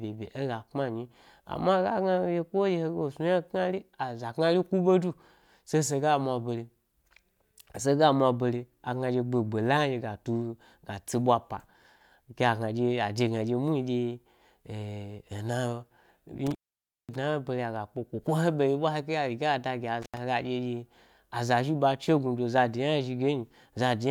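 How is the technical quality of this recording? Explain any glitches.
The speech has two dropouts from an intermittent contact. At 16.47 s and 20.02 s a loose connection briefly opens. The sound cuts out with crackle at each edge, for about 0.54 s and then 0.08 s.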